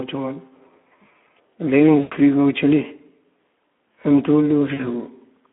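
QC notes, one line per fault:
Throughout: Speex codec. The speech has a hoarse, noisy edge because the coder has too few bits for the excitation, which fits about 11 kbps. The band runs from about 200 Hz to 3.4 kHz, so a spectrogram shows nothing above 3.4 kHz and a smeared, grainy harmonic structure below it.
1.99–2.16 s and 4.73–4.87 s: VoIP packet loss concealed by the speech codec. The decoder kept repeating its last pitch and filter while lowering the gain, so the sound turns into a fading buzzy tone or coloured noise. This points to about 120 ms lost, then 60 ms. On a spectrogram the harmonics go frozen and flat, and the waveform shows a decaying envelope.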